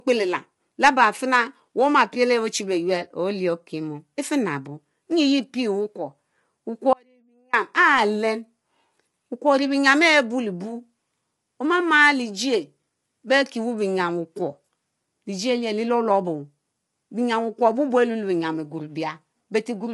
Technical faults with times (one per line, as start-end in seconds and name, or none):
0.00-19.94 low-delay AAC compression
6.93-7.53 audio dropout to a faint residue